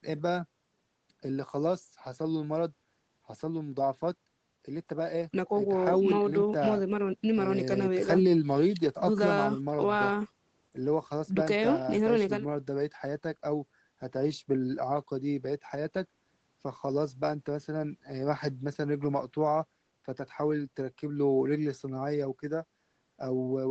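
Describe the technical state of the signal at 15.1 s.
At 15.1 s the speech is intact, with no dropout, glitch or distortion, only the steady call-codec band limit that leaves nothing above about 8 kHz.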